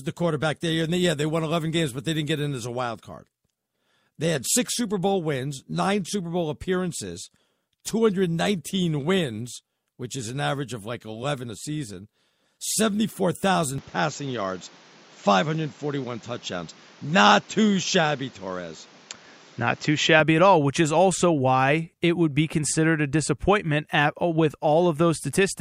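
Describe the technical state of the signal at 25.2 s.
At 25.2 s the speech signal is intact, with no audible technical fault at that moment.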